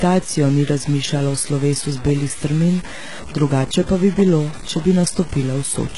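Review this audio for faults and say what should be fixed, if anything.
The sample values were likely cut down to very few bits by plain truncation with no dither, consistent with about 5 bits. Because the rounding error tracks the speech itself rather than sitting as a steady hiss, it turns into a grainy, rasping distortion that changes with every syllable, sitting only about 20 dB below the signal throughout the clip. The quiet tails of sounds crumble and sputter between coarse steps instead of fading smoothly. Keeping at least 16 bits through the chain, and adding dither whenever word length is reduced, would prevent this.

The speech was also run through HE-AAC compression at a very low rate, which fits roughly 12 kbps. At that rate the codec keeps only the lower band and rebuilds the treble by copying lower bands upward under a coarse envelope, so the damage is heavy throughout. The top end is synthetic and stops dead at 11.1 kHz, its harmonics do not line up with those below, and s sounds come out metallic and lispy. 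Encoding at a higher bitrate with a full-band codec such as standard AAC would avoid this.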